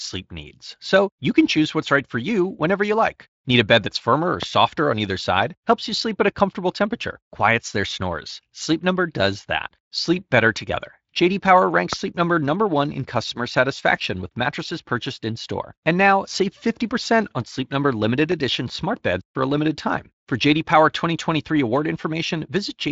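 At 4.43 s, just after "bed that's firmer or" and before "on either side", a single loud pop cuts in, about 15 dB above the speech, which carries on underneath. A second, stronger one of about 20 dB follows at 11.93 s, and a third of about 15 dB at 18.32 s, just before "smart beds for a". Each lasts about 20 ms and is likely a voltage step from a plug, a switch or static. On the waveform each shows as a tall, narrow spike, and on the spectrogram as a thin vertical stripe across the band. That band stops near 7.7 kHz, as the Speex coding at about 24 kbps would leave it.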